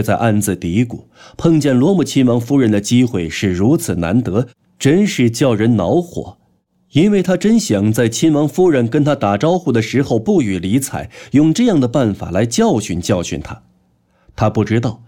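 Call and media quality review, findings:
No audible defects found in the speech signal: levels, timing and continuity hold steady across the whole recording, with no anomalies attributable to capture, transport or playback components.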